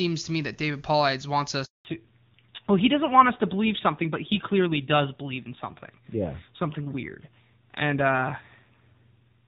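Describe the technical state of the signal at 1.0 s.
At 1.0 s the speech is intact, carried through the AMR wideband (HD Voice) codec at its top rate of 23.85 kbit/s, where any coding damage is faint at most.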